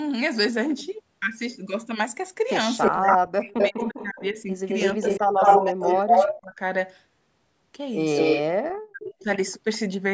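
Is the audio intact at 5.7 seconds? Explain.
No. From 4.69 to 6.41 s a second copy of the speech trails about 211 ms behind, roughly 5 dB louder than the direct sound. This is an echo leak, likely a loudspeaker's output reaching the far-end microphone and passing uncancelled back into the call.

Overlapping it, from 4.95 to 6.6 s, the speech dips and breaks up, dropping by as much as about 25 dB for around a second in total. This is speech suppressed in double talk, likely an echo canceller muting the talker because it couldn't separate them from the echo.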